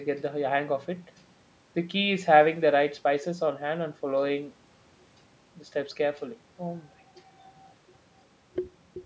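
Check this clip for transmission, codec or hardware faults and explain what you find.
No transmission, codec or hardware faults turn up here: the speech has passed through a call's microphone processing, whose high-pass filter trims the lowest bass and whose band stops at 8 kHz, as expected for that path.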